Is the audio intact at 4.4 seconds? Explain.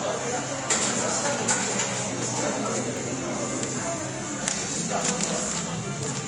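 No. At 4.4 seconds the sound is hissy and grainy, with roughened tones, smeared attacks and nothing above 10.6 kHz. The likely cause is Vorbis compression at a low rate, which fits roughly 33 kbps. The encoder drew a smooth spectral floor and quantised the treble detail on top of it so coarsely that the fine structure turned into noise-like grain, and it also lowered the cut-off. This happens across the whole clip of everyday sound, so 4.4 s is affected too.

The moment also falls inside a run of periodic USB or driver dropouts, which last from 0.92 to 6.04 s and recur every 1.02 s. A background task stalls the bus or the driver at that fixed interval. Each stall drops a fraction of a millisecond of audio and fills the gap with silence. The result is a series of small, evenly spaced ticks that can be heard against the signal.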